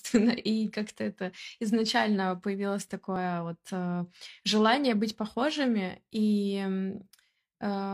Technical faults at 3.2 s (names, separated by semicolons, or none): overlap between stream segments